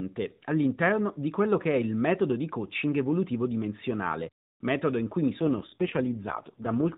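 From 5.40 s to the end, the speech grows rougher and more synthetic without any gap: an AMR rate drop, consistent with the codec falling from 12.2 to 4.75 kbps.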